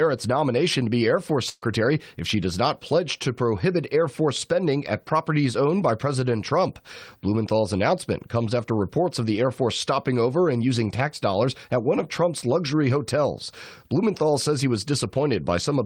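A burst of packet loss runs from 1.49 to 1.64 s, just before "if she does not". Several consecutive packets never arrived in time, so the receiver stretched the last speech it had for about 126 ms, repeating and steadily turning it down into a smeared, fading tail, followed by roughly 10 ms of silence. Speech then picks up further along, with about 120 ms of the original speech skipped outright.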